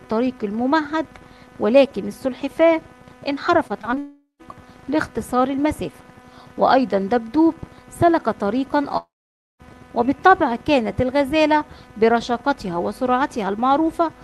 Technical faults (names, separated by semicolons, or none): repeated packet loss (robotic sound); long network dropout